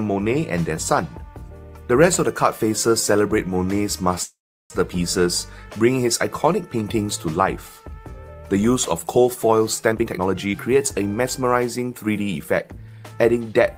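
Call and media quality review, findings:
Call audio freeze, 4.23 to 4.72 s. Sound stalls, carried briefly as a fading buzz, then about 360 ms of silence. Likely jitter buffer underrun from held-up packets. Gap inserted, nothing lost. Playback resumes where it stopped, now 466 ms later.

Jitter buffer speed-up, 9.92 to 13.12 s. Audio runs at 114% speed, pitch unchanged, sounds hurried. Receiver trimming short pitch-period pieces repeatedly to drain an overfull buffer. Roughly half a second of audio removed.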